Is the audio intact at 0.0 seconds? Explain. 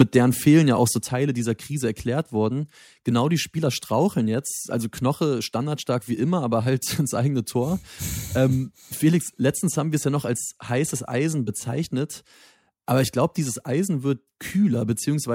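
No. The microphone's input gain was likely set too high, so at 0.00 to 0.02 s the signal runs about 4 dB past the converter's ceiling and roughly one sample in seven is pinned flat at the converter's limit. That is microphone overload: the tops of the waveform are sheared off, and the opening instant of the speech carries a hard, crackling distortion instead of a clean onset.

Right after that peak, at 0.02 s, comes a microphone volume step-down. The call software seems to have reacted to the clipping by lowering the device's input gain in a single move, here by about 4 dB. Voice and background fall together at once, so the level audibly drops just behind the distorted burst, with no gradual fade between the two.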